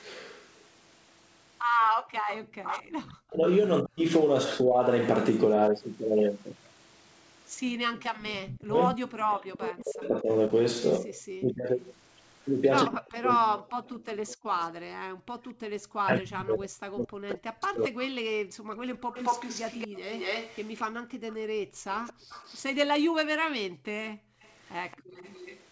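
Right at the start, 1.87 to 2.11 s, the room sound ducks by about 40 dB for a fraction of a second. That's background gated by the echo canceller: it clamped the mic while the loudspeaker was playing, then let go.

From 2.39 to 4.81 s the talker keeps dipping hard, by about 40 dB, in pieces. The same thing happens across 8.0 to 14.01 s, where around four seconds are pulled down, and again from 16.02 to 18.1 s. This is speech suppressed in double talk. The likely cause is both ends talking at once, so the canceller couldn't tell the near voice from the echo and turned everything down.

The background gating comes back from 14.29 to 15.65 s, with roughly a second of drop. It returns from 18.38 to 25.15 s in chunks adding up to about three seconds.

Over 19.12 to 22.61 s you hear a copy of the voice trailing 227 ms behind, only about 10 dB down. That's an echo leak, likely from a speakerphone whose canceller didn't strip its mic pickup. 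A fainter return, about 25 dB down, comes back at 24.42 to 25.63 s.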